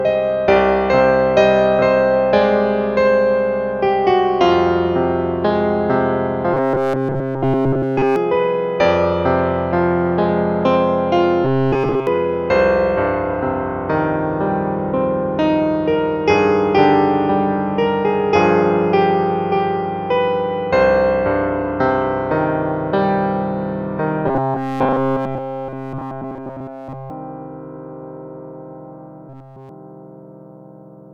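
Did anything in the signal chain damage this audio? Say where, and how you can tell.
Yes. From 6.54 to 8.16 s, 11.45 to 12.07 s, 24.27 to 27.10 s and 29.29 to 29.69 s the sound turns into a rigid, metallic buzz locked at 133 Hz, with essentially nothing fresh coming through. This is robotic sound from repeated short buffers, likely a driver or buffer underrun. The audio isn't arriving in time, so the same segment of about 7.5 ms is looped. That fixed repeat imposes its own 133 Hz pitch and skips the real audio.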